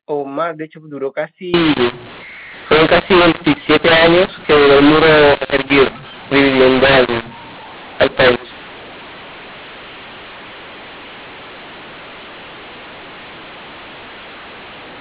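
From 1.54 s to the end, the mu-law telephone audio is decoded as A-law, scrambling levels: speech turns harsh and distorted, and pauses fill with noise.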